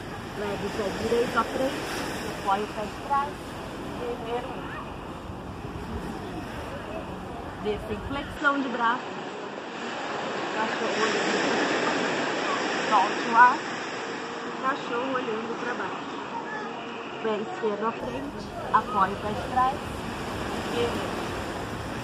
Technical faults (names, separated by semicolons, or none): input switched to a poorer device